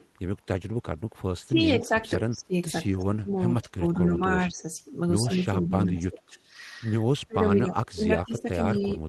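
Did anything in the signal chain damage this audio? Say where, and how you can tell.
Yes. Echo leak appears at 0.0 to 0.08 s, 8.38 to 8.42 s and 8.8 to 8.87 s as a faint copy trailing the sound by 113 ms. It is weak at first and stronger near the end. This is likely call processing at the far end, where the echo canceller let residue of the loudspeaker signal back into the microphone path.

Speech suppressed in double talk shows as level dips of up to about 20 dB across 1.36 to 2.54 s, 2.9 to 4.66 s and 5.24 to 6.35 s. A shallower dip runs from 7.27 s to the end. The likely cause is the same echo canceller mistaking overlapping talk for echo and attenuating both.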